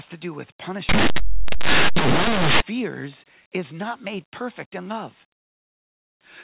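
Linear audio read as companded, from 0.89 to 2.60 s in this speech clip, right after "to do with": plain linear 8-bit samples are expanded as mu-law codes, so values just one side of zero become the largest outputs, producing very loud, harsh distortion.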